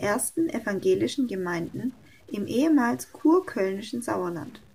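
From start to finish the speech carries a stuck bit: one bit of the sample values appears held at a fixed state, most likely from a faulty data line or converter. Roughly half the samples are pushed off by a step of about -50 dBFS, giving a grainy noise, and pauses fill with a hiss-like noise floor. On a waveform the silent gaps sit on a fuzzy band instead of a flat line; a spectrogram shows broadband noise under everything.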